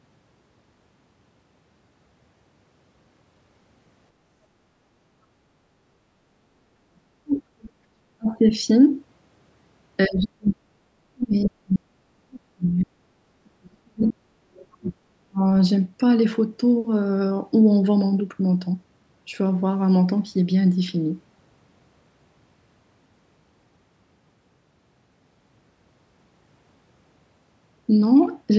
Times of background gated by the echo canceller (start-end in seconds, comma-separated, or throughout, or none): 5.31-5.70